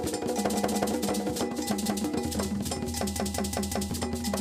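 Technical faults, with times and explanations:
0.56–0.93 s, 1.86–2.04 s and 3.16–3.90 s, repeated buffer: fresh audio arrived late, so the same 186 ms chunk replays (twice, once, then four times) with a hard join each pass. That gives a clear stutter, the length fitting an 8192-sample buffer.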